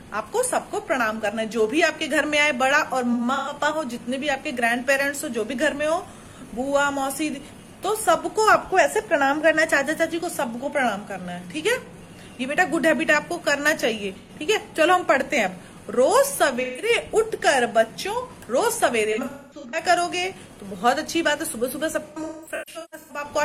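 AAC frame loss with concealment occurs five times: 3.12 to 3.53 s (213 ms lost, scattered), 14.17 to 14.29 s (85 ms), 16.61 to 16.89 s (171 ms), 19.12 to 19.83 s (384 ms, runs up to about 200 ms) and 22.08 to 23.25 s (683 ms spread over about a second). The decoder rebuilds missing frames from the last good spectrum, so each gap sounds smeared, noisy or phasey. A spectrogram shows frame-wide blocks of blurred, static-looking energy where detail should be.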